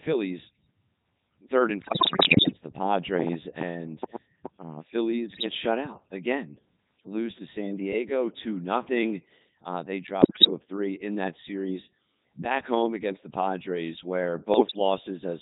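Throughout, the speech sounds robotic and buzzy, the sign of a Codec 2 vocoder at 3.2 kbit/s that rebuilds the voice from sine waves. It transmits only pitch, voicing, energy and spectral shape. From 1.83 to 2.53 s, right after "third and", the voice breaks into warbling, pitch-jumping gibberish, and the same happens briefly from 5.32 to 5.46 s before "shut out again lose", from 10.22 to 10.50 s before "of three in that", and from 14.54 to 14.79 s. These are bit errors on digital voice radio. Corrupted bits, as many as roughly one in seven in the first burst, scramble each frame's pitch, level and tone colour.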